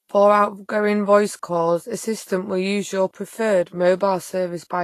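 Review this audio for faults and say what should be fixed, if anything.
The speech has plainly audible codec damage across its whole length, likely Vorbis compression. Nothing survives above 14.2 kHz, and the treble just below that cut-off has turned grainy and hissy, with attacks blurred, which points to a low bitrate of around 33 kbps. The coarsely quantised residue replaces fine high-frequency detail with noise of similar energy. A simple low-pass filter would only dull the top end, and MP3 damage tends toward metallic, warbling artefacts. Encoding from the original source at a higher Vorbis quality setting, or keeping a lossless copy, would prevent this.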